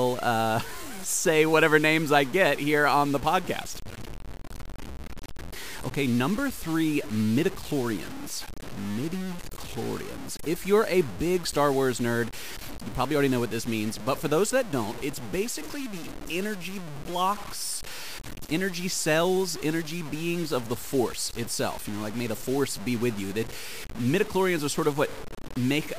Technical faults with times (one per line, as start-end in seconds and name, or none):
0.00-25.98 low bit depth without dither